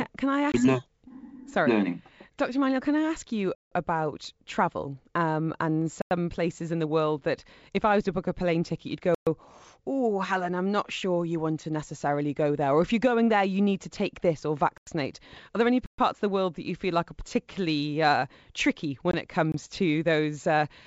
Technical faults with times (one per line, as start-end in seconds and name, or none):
0.52-0.55 packet loss on an ADPCM call
3.55-3.72 block of digital silence
6.02-6.11 block of digital silence
9.15-9.27 block of digital silence
14.78-14.87 block of digital silence
15.86-15.98 block of digital silence
19.11-19.15 packet loss on an ADPCM call
19.52-19.54 block of digital silence